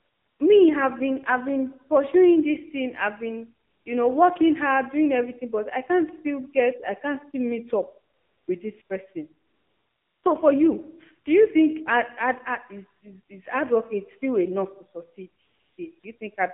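The whole clip passes through the AMR narrowband mobile codec at 7.4 kbps. The line is limited to about 150 Hz to 3.5 kHz. A few pulses excite a vocal-tract model. The speech sounds buzzy and synthetic. The damage is plain.

AMR comfort noise fills pauses where the phone stopped sending speech frames: 0.0–0.4 s, 3.68–3.86 s, 8.14–8.48 s, 8.82–8.90 s, 9.48–10.24 s, 15.42–15.78 s, 16.00–16.04 s and 16.18–16.20 s. Smooth synthetic hiss replaces the real background. It switches in and out.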